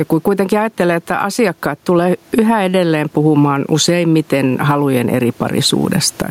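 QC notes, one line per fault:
Throughout: gain pumping. The room noise sits about 41 dB below the speech, and the gain swings by around 15 dB, leaving the speech squashed. The likely cause is input gain set far too high, with a fast limiter clamping each peak.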